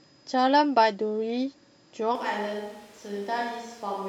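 At 2.15 s the speech suddenly turns roomy and hollow, with less bass. The level falls by about 5 dB, and room noise sits only about 25 dB below the speech. This is likely a switch to a distant microphone. It lasts to the end.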